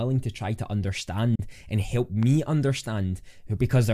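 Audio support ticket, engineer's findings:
Digital broadcast dropout, 1.35 to 1.40 s, just before "and help". Speech mutes with a fast fade, about 8 ms, and returns. Receiver muting after one corrupt or missing frame; roughly 32 ms of audio lost, consistent with a 32 ms frame.

Loud pop, 2.23 to 2.25 s, shortly after "and help". One sharp transient, peaking about 5 dB above the speech, which continues underneath. Likely cause: voltage step from a connector, switch, static discharge or driver glitch, shaped by downstream circuitry.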